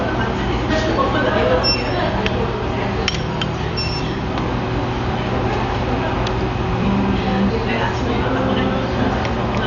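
From start to finish the sounds are dull, with nothing above 6.9 kHz, and a rough, fluttering noise clings to tones. Heavy Dolby Digital compression is the likely cause, consistent with a bitrate near 48 kbps: the band was narrowed and many frequency lines got no mantissa bits, leaving dither noise in their place.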